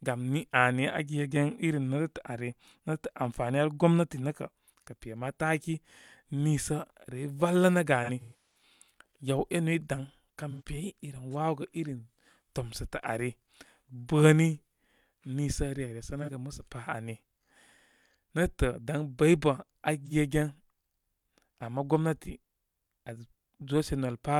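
AAC frame loss with concealment at 8.03–8.62 s (scattered, longest run about 150 ms), 10.50–10.62 s, 16.22–16.29 s and 20.06–20.12 s: missing frames are rebuilt from the last good spectrum, so the speech turns into smeared, phasey patches rather than dropping to clean silence.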